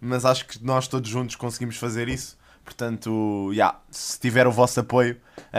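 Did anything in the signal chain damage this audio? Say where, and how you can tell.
No, nothing in the signal chain audibly damaged this audio.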